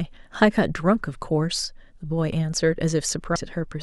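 A speech clip with one brief fault near the end. At 3.35 s there is a short glitch caused by damaged data in the compressed stream. Corrupted bytes made the decoder misread that frame and lose sync. It then resynchronised at the next valid frame header.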